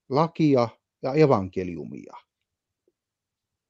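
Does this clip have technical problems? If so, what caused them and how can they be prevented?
No, this clip has no technical problems, so there is nothing to prevent.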